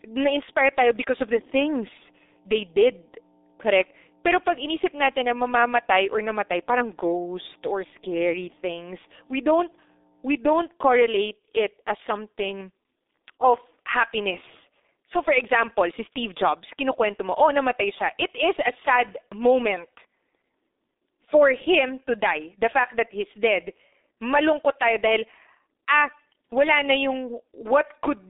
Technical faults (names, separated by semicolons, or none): G.723.1 codec; mains hum